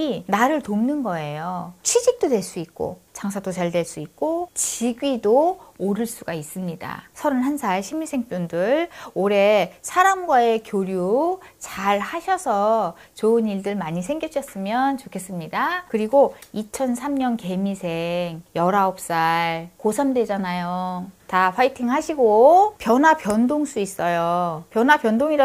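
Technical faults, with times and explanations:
No technical faults are audible anywhere in the clip.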